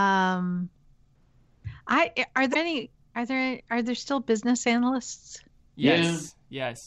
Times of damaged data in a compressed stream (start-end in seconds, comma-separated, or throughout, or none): 2.51-2.56